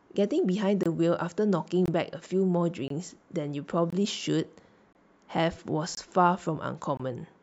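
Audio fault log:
0.83–0.86, 1.86–1.88, 2.88–2.90, 3.90–3.93, 4.93–4.95, 5.95–5.97 and 6.97–7.00 s: gap between chunks. The speech arrives in 1.0 s chunks with a 23 ms silence inserted at each join. Nothing is lost, but the flow stops abruptly about once a second, giving a rhythmic stutter. The waveform shows flat near-silent slots with hard edges, and the spectrogram shows evenly spaced thin blank vertical stripes.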